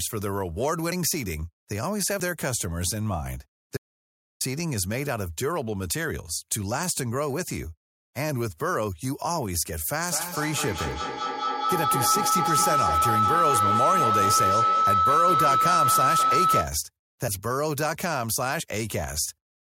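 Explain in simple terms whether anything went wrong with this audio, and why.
A few things do go wrong in this speech recording.

At about 2.2 s there's a small jump in the sound. That's a dropped buffer (overrun): a chunk of audio, something like 40 milliseconds, most likely wasn't picked up from the hardware in time and got overwritten. The audio on either side is then stitched straight together, so instead of a gap you hear a tiny skip forward.

From 3.77 s to 4.41 s the sound cuts out completely for about 0.63 s. This is an audio dropout to silence. The gap is dead silent, with no room noise at all, which tells you the input itself vanished, likely from a loose connection, a dropped link or an accidental mute, while the recording carried on writing nothing. Whatever was said in that stretch is lost.

From 10.08 s to 16.79 s there's a feedback howl. A microphone is picking up a loudspeaker that's playing its own signal back, so the sound goes round and round and gets louder each trip. 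It settles into a tone around 1.5 kHz, with each trip round the loop taking roughly a fifth of a second, and at its peak it's louder than the speech.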